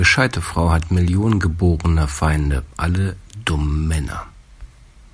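No technical faults can be heard anywhere in the recording. There is nothing here to place on a timeline.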